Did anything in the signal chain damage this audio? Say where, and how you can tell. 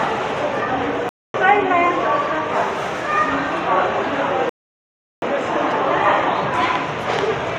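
Yes. A playback stall sits at the playback stage: the sound stops dead from 1.09 to 1.34 s, a 250 ms gap, then carries on. The likely cause is the output thread being blocked or starved briefly. That is shorter than the later buffering pause.

A rebuffering stall occurs at the network and playback stage, from 4.49 to 5.22 s. The audio falls silent for 728 ms and resumes exactly where it left off, with nothing skipped. That shows the player waited for more downloaded data, adding time rather than losing any.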